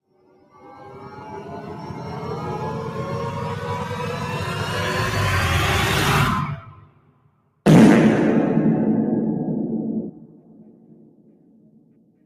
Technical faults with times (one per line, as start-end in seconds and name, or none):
0.00-12.26 noise suppressor applied to music or sounds
0.07-1.24 sound cut by the noise suppressor
6.56-7.65 sound cut by the noise suppressor
10.08-12.26 sound cut by the noise suppressor